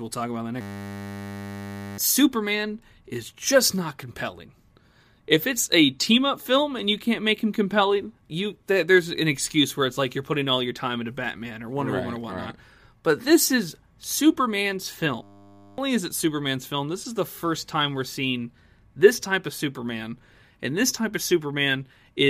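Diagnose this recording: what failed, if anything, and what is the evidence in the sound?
System hang loop in the driver buffer: the system froze and replayed one 10 ms chunk, buzzing at 100 Hz, after "talk about in the" (0.61–1.98 s) and before "is it" (15.23–15.78 s).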